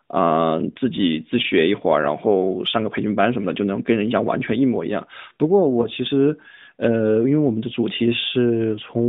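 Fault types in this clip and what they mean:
Lost AMR speech frames: Around 5.82 to 5.87 s there's a brief dip or warble. That's a single 20 ms frame that failed its checksum over the radio link, so the decoder filled the gap by reusing the last good pitch and vocal tract settings at reduced gain. With only one frame gone, it never stretches or fades to silence. The voice comes back weak or rough for a moment, carried by the 12.2 kbps narrowband AMR path.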